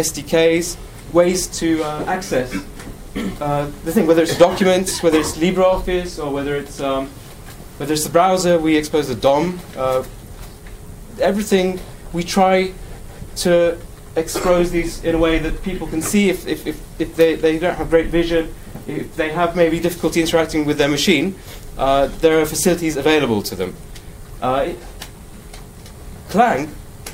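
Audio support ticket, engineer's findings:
Listened to the whole thing and found nothing to flag, so no action is needed on this ticket.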